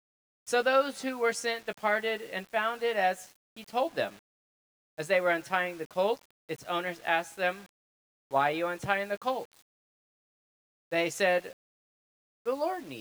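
Low bit depth without dither runs throughout: the signal was likely rounded to very few levels, which fits about 7 bits, with no dither. The error follows the sound, leaving grainy, gritty distortion roughly 30 dB below it.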